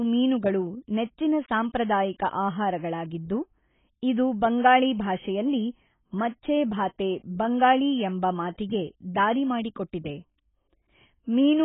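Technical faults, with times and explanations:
Throughout: AAC compression. The speech sounds dull and smeared, with nothing above 3.8 kHz and a warbling, fizzy texture on sustained sounds and sibilants. The cause is likely heavy AAC-LC coding at a bitrate that points to around 16 kbps. The codec discards the top band outright and starves the remaining bands of bits. A spectrogram shows energy ending at a flat ceiling near 3.8 kHz, with patchy holes and blotchy blocks beneath it.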